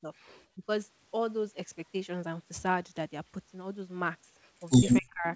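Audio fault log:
0.01–0.1 s, 0.55–0.68 s, 5.01–5.26 s: speech suppressed in double talk. The speech briefly sinks by about 15 to 25 dB, most deeply in the later two. This is likely an echo canceller ducking its own talker while the far side speaks. Unlike a dropout, the sound dips rather than vanishing outright, and the call path's 8 kHz ceiling stays unchanged around it.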